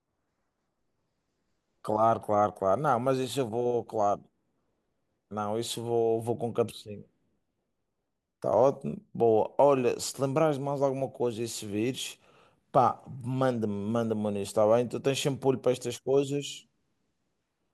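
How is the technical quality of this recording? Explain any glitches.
No glitches can be heard anywhere in this speech recording. There is no technical fault here to explain.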